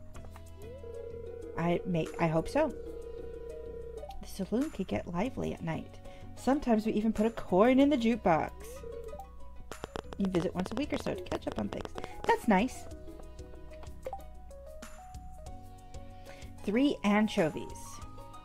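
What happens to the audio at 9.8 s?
At 9.8 s the audio is inside a train of clicks running from 9.72 to 12.31 s. Sharp pulses land about 10.5 times a second, at an uneven pace. There are roughly thirty of them, all much the same shape. They peak around 15 dB above the surrounding sound, so they tick and pop clearly over it. The likely cause is interference from nearby equipment or a faulty connection or power supply injecting the pulses.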